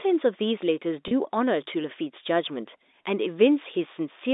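At 1.08 to 1.11 s, about 30 ms of packets were lost, consistent with three 10 ms packets. Packet loss with pitch repetition filled the gap by looping the last pitch period, giving a brief held, buzzy sound over the narrow G.711 telephone band.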